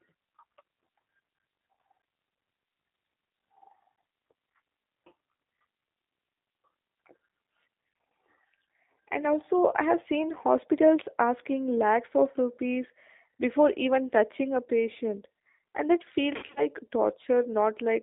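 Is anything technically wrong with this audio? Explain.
Yes. Throughout, the G.729 codec rebuilds the speech at 8 kbit/s from a filter and sparse pulses, so everything above 3.7 kHz is gone, leaving rough, synthetic, plainly damaged speech. From 16.36 to 16.67 s, just after "a patient and that", VoIP packet loss concealed by the speech codec replaces about 140 ms of lost audio, in runs of up to 60 ms, with a fading extrapolation of the last sound, a buzzy tone or coloured noise, and the voice stays weak or distorted afterwards.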